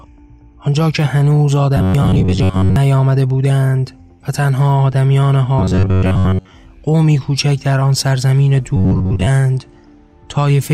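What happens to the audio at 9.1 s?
From 8.77 to 9.28 s, audio likely arrived too seldom and 11 ms chunks looped: robotic sound from repeated short buffers, a metallic 94 Hz buzz.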